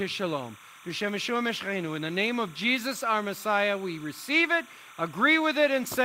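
Speech carries timecode bleed throughout: a chirping warble near 1 and 2 kHz, roughly 20 dB below it, from 29.97 fps linear timecode leaking in.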